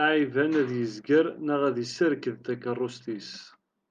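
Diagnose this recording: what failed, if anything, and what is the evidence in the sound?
No fault detected anywhere.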